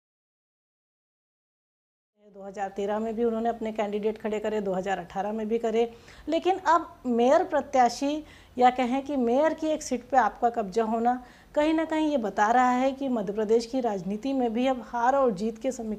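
No faults to report; the level fades in smoothly from around 2 s and reaches full level at 3.15 s, with no click or hard edge.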